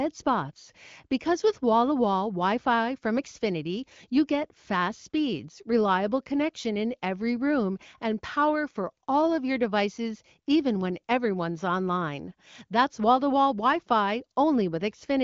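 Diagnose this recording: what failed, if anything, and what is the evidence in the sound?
Nothing failed here.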